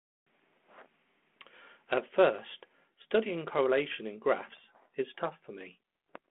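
No technical faults are audible.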